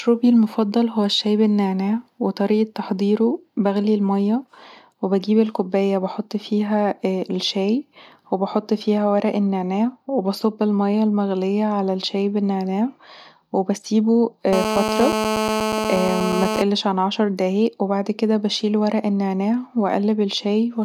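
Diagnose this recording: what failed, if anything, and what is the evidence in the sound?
GSM phone buzz entered the analogue wiring from 14.53 to 16.62 s, before "عن عشر دقايق وبعد". It is a steady, harmonic-rich 217 Hz rasp of rectified radio bursts, only about 2 dB below the speech, unlike smoother 50/60 Hz mains hum.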